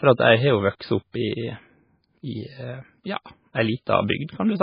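Speech with heavy codec damage throughout, most likely from MP3 compression at a very low bitrate, which fits something around 16 kbps. Nothing survives above 5.1 kHz, so the treble is cut off flat, and weak frequency components flicker in and out from frame to frame, giving a watery, swirling texture with metallic chirps on s sounds and smeared consonant attacks. That flickering sets it apart from a plain low-pass filter, which would dull the sound cleanly without the swirl.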